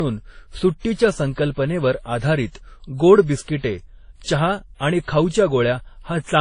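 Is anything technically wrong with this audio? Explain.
Yes. Throughout the speech, the top end stops sharply around 10.1 kHz, and the sound carries layered smearing and swirly, watery artefacts. This is likely transcoding between lossy codecs: an earlier low-bitrate encode, consistent with WMA, re-encoded through Vorbis, which compounds both codecs' distortions while keeping the lowest cut-off.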